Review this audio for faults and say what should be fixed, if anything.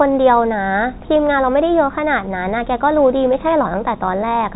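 No faults found; nothing needs fixing.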